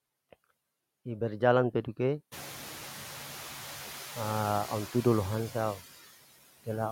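A noise suppressor is working on the speech for the whole clip, cutting the bands it judges to be steady noise frame by frame by about 8 dB. That cut is applied unevenly, so the background sinks in the pauses between words and swells back up beneath them. The room noise rises by roughly 23 dB at around 2.5 s and then sits about 16 dB below the speech.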